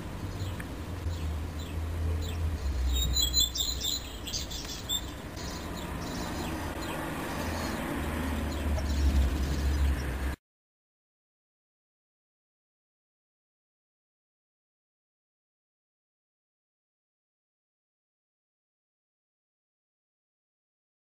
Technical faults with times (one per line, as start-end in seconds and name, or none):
1.03-1.06 broken MP3 bit reservoir
5.34-5.37 broken MP3 bit reservoir
6.73-6.76 broken MP3 bit reservoir
8.77-8.80 broken MP3 bit reservoir